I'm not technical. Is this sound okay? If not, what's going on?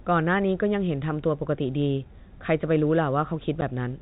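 No. There is packet loss filled with silence at 3.61 s. The speech travelled in small chunks, and one chunk never arrived. In its place the receiving end played a brief gap of silence, about 10 ms long. The sound stops and restarts abruptly rather than fading, so that tiny hole has hard edges. The clip is in telephone-quality sound, so it stays narrow and muffled throughout.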